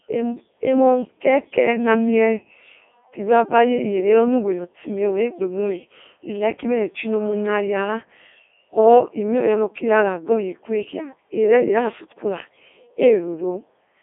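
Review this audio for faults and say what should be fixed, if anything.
The whole clip has gone through a Codec 2 vocoder, and it sounds robotic and buzzy. The decoder rebuilt the speech from sine waves using pitch, voicing and envelope, not the real waveform. There's nothing above 3.6 kHz, and the heavy damage fits the 3.2 kbit/s mode. To prevent it, capture or route this speech over a path that keeps the actual waveform instead of a low-rate vocoder link.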